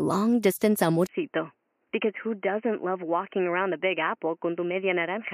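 From 1.07 s, after a 20 ms gap, speech turns boxy and cut above 3.1 kHz, quieter, with new background noise. Unlike plain filtering, this points to a likely input switched to a poorer device.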